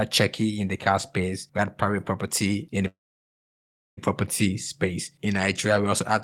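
At 2.87 s, just after "private property in the", the speech stops in a call audio freeze lasting until 3.99 s. A brief fading buzz trails off into about one second of silence. Speech resumes with "property space", with nothing lost, just delayed. Packets likely stalled, emptying the jitter buffer.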